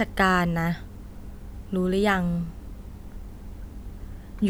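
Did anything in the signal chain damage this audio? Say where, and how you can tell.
No, nothing in the signal chain has damaged this speech recording. No stage between capture and playback leaves an audible mark anywhere in the clip.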